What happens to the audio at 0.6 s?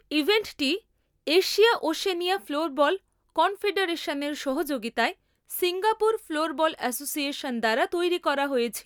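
At 0.6 s the speech plays through intact, with no dropout, glitch or distortion at that moment.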